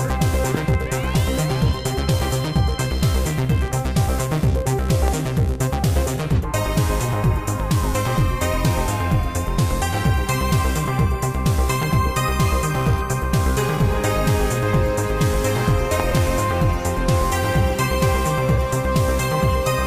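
Loud pops land at 0.55 to 0.76 s and 11.83 to 12.09 s (double), 5.08 to 5.10 s (single), and 16.00 to 16.20 s (double), peaking about 10 to 15 dB above the signal. Each is likely a voltage pulse from a switch, plug or static, heard as a sharp thump while the sound continues beneath.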